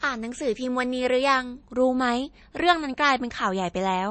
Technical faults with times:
0.00-4.10 MP3 compression

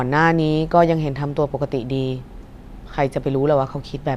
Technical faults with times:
none

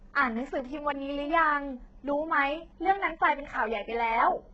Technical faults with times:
0.00-4.53 HE-AAC compression

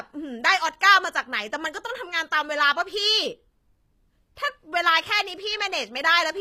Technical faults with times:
0.00-6.41 HE-AAC compression

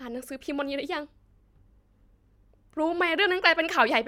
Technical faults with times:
none

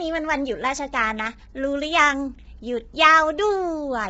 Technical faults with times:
0.00-4.09 low-delay AAC compression

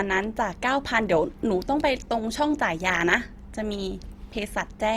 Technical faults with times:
0.00-4.96 Opus compression

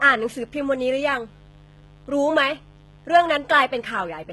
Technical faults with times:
0.00-4.32 mains buzz
0.00-4.32 HE-AAC compression

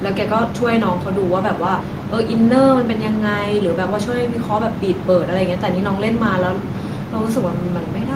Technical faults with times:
none

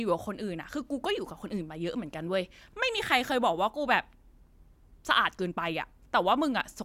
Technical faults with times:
none

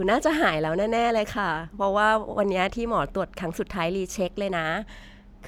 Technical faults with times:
none

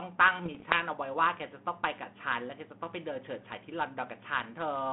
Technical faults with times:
0.44-0.76 bit errors on an ADPCM link

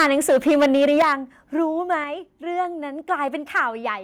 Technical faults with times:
0.00-1.13 microphone overload
1.02 microphone volume stepped down
2.04 microphone volume stepped down
3.56-3.60 microphone overload

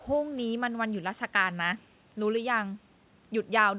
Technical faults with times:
none

